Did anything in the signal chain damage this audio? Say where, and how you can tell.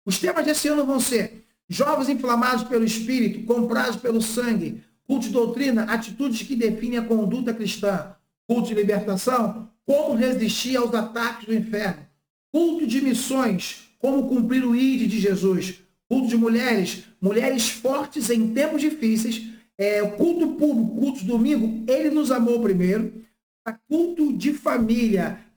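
Yes, sample clock jitter at the converter, across the whole clip. A roughness riding on the sound, roughly 20 dB below it, swells on loud, bright passages and vanishes in silence, unlike a steady noise floor, which fits timing wander of around 10 microseconds.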